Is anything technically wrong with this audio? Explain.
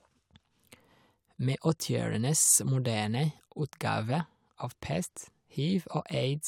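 No, nothing technically wrong can be heard in this speech recording, and the signal stays steady and intact throughout.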